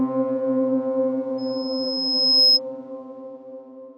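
Loudspeaker feedback squeal from 1.38 to 2.60 s: the microphone re-amplifies its own speaker output, so a 5.1 kHz tone swells over about a second to roughly 10 dB above the sound.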